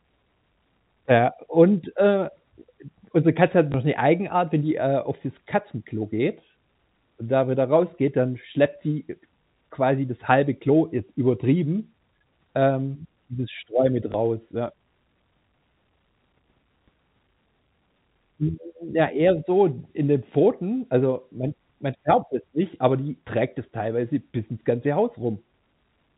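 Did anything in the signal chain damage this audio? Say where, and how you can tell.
Yes: packet loss with last packet repeated, in the network stage, at 3.72 and 14.12 s. Each lost 20 ms packet was replaced by a replay of the previous packet, leaving a small blip.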